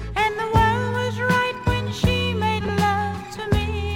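Frames out of order occur from 2.60 to 2.69 s. Two adjacent 40 ms blocks of audio reached the decoder in swapped sequence and were played back that way, so the later block sounds before the earlier one. The result is a brief garbled flutter. Nothing is missing, and the timing of the sound on either side is unchanged.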